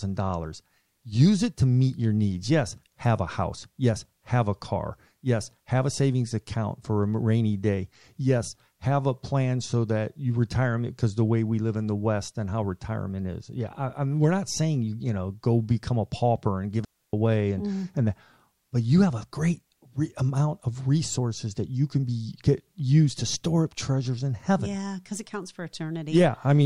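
Speech, with a digital wireless dropout from 16.85 to 17.13 s, after "a pauper and give". The receiver mutes for 0.29 s, leaving clean silence without noise bursts, before "away and mm and".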